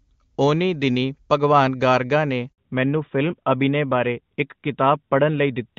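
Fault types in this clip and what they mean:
Handover gap: Just after "ਦਿਨੀਂ ਭਗਵਾਨ ਗਾਰਗਾ ਨੇ" the speech dies away at 2.52 s and stays silent for 60 ms, until 2.58 s, when sound returns on a different-sounding link. This is the phone passing the call from one network to another. No speech frames reached the listener while the new connection came up, so whatever fell in that short window is simply missing.
Fallback to narrowband: From 2.58 s to the end, the speech loses its airy top. Sibilants go dull, the sound turns boxier and rougher, and nothing remains above 4 kHz. Before the switch the call ran cleanly on the AMR wideband (HD Voice) codec, at what sounds like a high rate near 23.85 kbit/s. Afterwards it dropped to an older narrowband codec, which points to AMR-NB at 12.2 kbit/s, and that caps the bandwidth at classic telephone quality.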